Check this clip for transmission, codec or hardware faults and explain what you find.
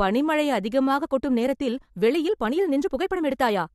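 There is one fault: a time-stretched section. At 0.97 s the speech suddenly speeds up, and it stays fast until the end of the clip. The pace jumps to 1.4 times normal. The pitch does not change. The likely cause is software squeezing this part to fit a shorter length. To keep the pitch, it drops short pieces of the audio rather than playing it faster. The result sounds rushed. The abrupt change in pace marks where it begins.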